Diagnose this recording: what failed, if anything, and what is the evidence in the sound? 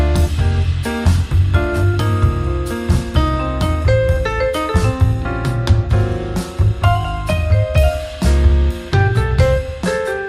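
Nothing in the recording stood out as a fault on careful listening.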